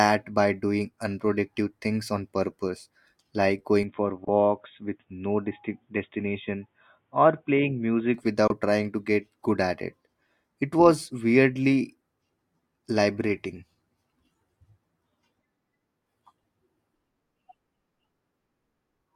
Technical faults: input switched to a poorer device; Bluetooth dropout

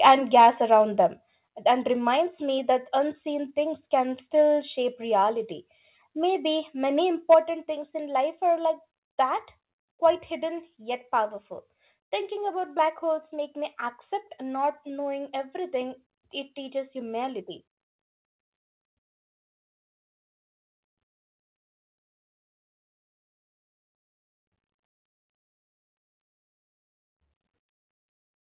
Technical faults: microphone overload; microphone volume stepped down

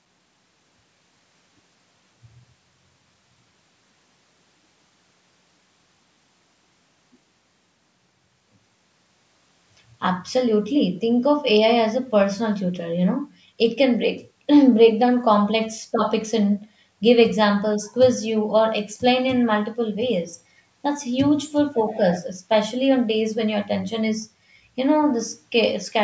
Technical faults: none

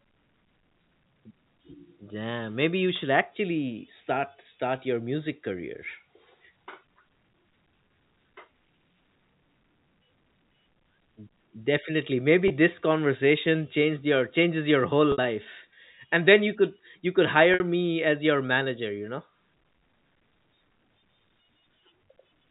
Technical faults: packet loss with pitch repetition

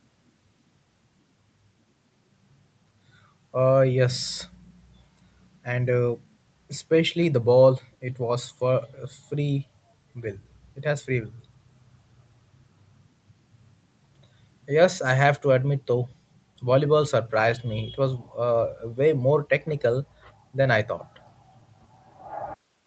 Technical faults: none

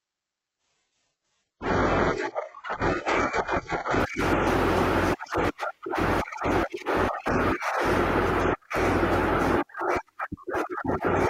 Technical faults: adaptive stream starting at a low bitrate

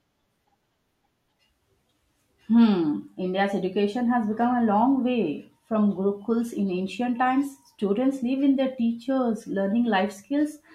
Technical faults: none

